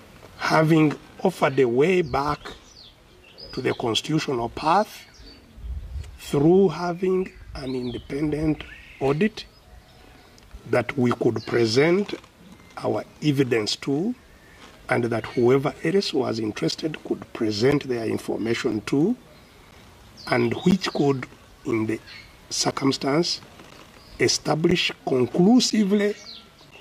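Periodic USB or driver dropouts appear from 16.71 s to 26.72 s. Every 1.0 s, roughly ten milliseconds of audio vanishes into silence, about ten times in all. Each gap is heard as a regular tick while sound plays, pointing to a recurring bus or driver stall.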